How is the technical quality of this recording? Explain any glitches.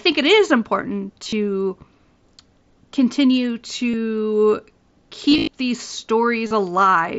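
Four short glitches, heard as brief buzzy, held tones with a slight warble on recovery: concealed Bluetooth headset packet loss, where the receiver patches missing audio by repeating the last matching stretch. They fall at 1.23–1.33 s just after "it is important", 3.91–3.94 s, 5.29–5.47 s (the longest and most scattered) and 6.47–6.51 s. The mSBC headset link limits the sound to wideband, with light grain on loud passages.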